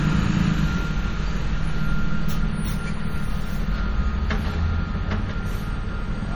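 Throughout, the sound is watery and swirly, with faint detail flickering on and off. That points to likely MP3 compression at a low bitrate near 48 kbps.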